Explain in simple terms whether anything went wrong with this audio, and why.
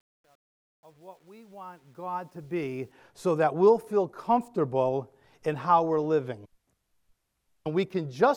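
Something did go wrong at the start. The speech fades in over the first 2.92 seconds, and that fade-in carries truncation distortion. Whatever turned the level down kept too few bits and added no dither, so the quietest parts snap to coarse steps. It's roughest from 0 to 2.08 s, where the audio sounds gritty. The grain fits a stage keeping only about 10 bits.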